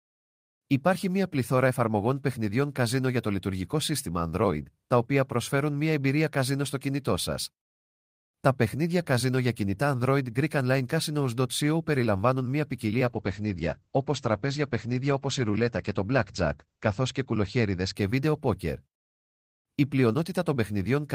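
A call bitrate drop runs from 13.06 to 18.01 s, starting just after "περιλαμβάνουν μια ποικιλία" and clearing before "βίντεο πόκερ". When the call's bandwidth estimate fell, the encoder was pushed to spend far fewer bits, which here fits a fall from around 32 kbps to about 12 kbps. It coded more coarsely and cut the top end from 20 kHz to 8 kHz, so for nearly 4 s the speech turns muffled and rough.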